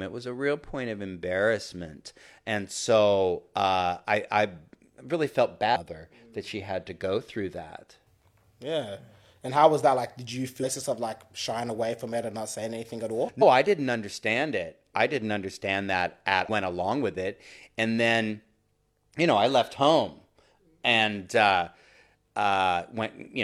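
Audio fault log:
5.72, 10.59, 13.38, 16.44 s: damaged data in a compressed stream. Each is a roughly 50 ms glitch, as after "I I really felt" and "saying anything at all". Corrupt bytes throw the decoder off sync until it finds the next frame header.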